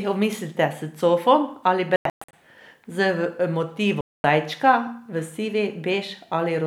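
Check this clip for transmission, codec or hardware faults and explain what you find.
There are two short holes in the speech, both sounding like a Bluetooth dropout. The first starts right after "omislite s cofom ali" at 1.96 s and runs to 2.33 s: several silent gaps, adding up to about 0.28 s of missing audio over 0.37 s, the longest gap 0.12 s. The second, from 4.01 to 4.24 s, loses about 0.23 s. The likely cause is audio packets reaching the headphones too late and being discarded, so the output falls silent. The speech then picks up further along, as though it had kept playing through the gap.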